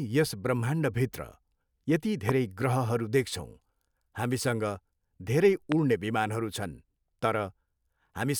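A brief voltage spike, likely from a switch, plug or static discharge, entered the speech path twice, producing a loud pop at 2.29 to 2.31 s, around 20 dB above the speech, and another at 5.72 to 5.74 s, around 15 dB above. Each is a single sharp crack over continuing speech.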